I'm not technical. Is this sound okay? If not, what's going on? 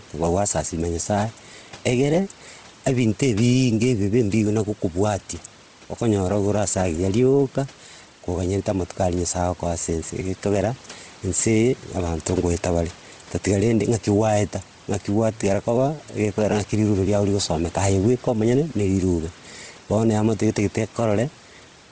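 No, not quite. There are two problems, and both last the whole clip.

The first is gain pumping. The volume breathes up and down. The likely cause is a microphone level set too high. An automatic control then keeps pulling the volume down on loud moments. Loud and quiet parts end up squashed together.

The second is Bluetooth LC3 compression. The speech sounds breathy and grainy, with a rough, hissy edge. This is likely the Bluetooth audio format squeezing the sound hard. It chops the audio into very short slices, each 7.5 milliseconds long. It throws away much of the crisp upper detail and fills the gap with noise. Here the damage is heavy. The faint room noise underneath is just the recording space.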